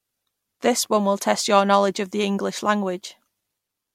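A corrupt frame decoded at 1.21 s in this speech: one compressed frame arrived with flipped bits, and the decoder played it anyway instead of concealing it. Misread gains and codes placed energy at frequencies that don't belong there for roughly the span of that single frame, so the speech is briefly marred by a short chirp, squeak, blip or burst of noise, peaking at about -30 dBFS.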